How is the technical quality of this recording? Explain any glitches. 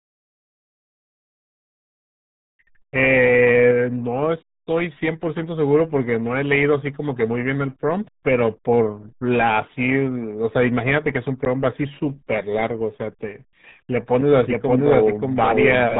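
Poor, with heavy low-bitrate coding throughout and a doubling at the end.

Throughout, the RealAudio 14.4 codec squeezes the speech into what sounds like about 8 kbit/s, cutting everything above 3.8 kHz and leaving it muffled and gargly.

From 14.46 s to the end, a doubled audio track appears, likely from a second, slower capture path. A full-band copy about as loud trails roughly half a second behind and cuts in abruptly.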